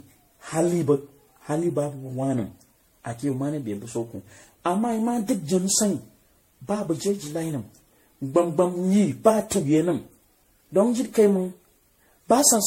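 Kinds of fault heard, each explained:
Generation loss: the speech sounds swirly, smeared and hollow, with blurred attacks and nothing above 16.5 kHz. That's more damage than one MP3 pass at around 64 kbit/s would leave, so it was likely re-encoded about fifteen times, each pass adding fresh quantisation noise.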